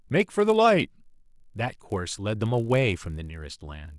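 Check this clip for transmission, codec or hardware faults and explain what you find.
A 50 Hz buzz runs under the speech for the whole clip, vanishing in pauses. This comes from the resampler being restarted on every block: each 20 ms block is converted on its own, leaving a small error at every edge.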